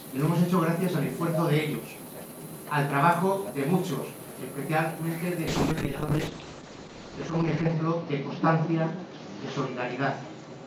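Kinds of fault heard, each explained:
call bitrate drop: from 5.49 s onward the encoder gets far fewer bits, so the sound turns rough and loses everything above 8 kHz, which fits roughly 8 kbps.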